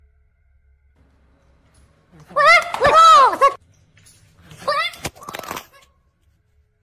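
The whole clip plays too fast and too high. It has a wrong sample rate fault from start to finish. Everything runs about 1.45 times faster than it should. Pitch rises with it, by roughly 6.45 semitones. Speed and pitch move together, so no resampling took place. The samples were simply clocked out faster than they were captured. The ratio fits audio recorded near 22 kHz and played back at 32 kHz.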